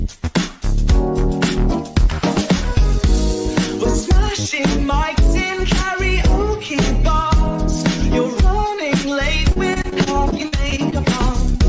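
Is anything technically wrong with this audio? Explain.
Yes. From 9.52 to 10.94 s there is repeated packet loss that gives the sound a robotic quality. Over that stretch, more than a dozen short holes arrive in quick succession, the longest about 42 ms. Together they add up to roughly a fifth of the span. Each gap is filled by extending the last received sound, and the next gap follows before the stream recovers. The result is choppy audio with fragments missing. Throughout, the call path's band limit at 8 kHz, consistent with G.722, is audible as an absence of top end.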